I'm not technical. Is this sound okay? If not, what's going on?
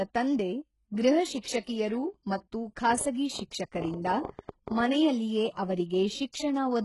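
No. The speech sounds heavily processed, with gritty, metallic s sounds and an unnatural treble. This is likely HE-AAC compression, which keeps only the lower frequencies and fakes the top end from copies of them.

At 1.40 to 1.45 s and again at 4.25 to 4.29 s, a brief hiss comes just before a sharp sound, softening its start. This is pre-echo: the compression spreads its noise backwards into the quiet moment before the attack.

From 2.93 to 4.81 s there is a train of clicks, around fifteen ticks at an uneven pace of about seven or eight per second. They likely come from electrical interference or a faulty connection or power supply.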